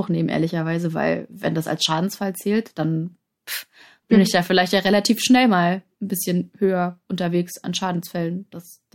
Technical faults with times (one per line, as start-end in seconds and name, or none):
none